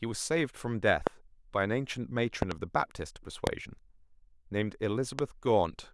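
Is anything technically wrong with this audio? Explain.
Yes. Loud pops occur at 1.07–1.09 s, 2.42–2.54 s (a double pop), 3.47–3.49 s and 5.19–5.21 s. Each rises roughly 20 dB above the speech, which continues underneath. The likely cause is a voltage spike from a switch, plug, static or driver glitch, shaped by the downstream circuitry into a thump rather than a gap or dropout.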